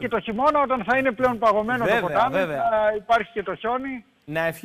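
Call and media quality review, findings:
Filter restarted on every block, throughout: buzz at about 46.9 Hz, tracking signal level and vanishing in silence, unlike mains hum. Filter state reset per block; transient at each start fits 1024-sample blocks at 48 kHz.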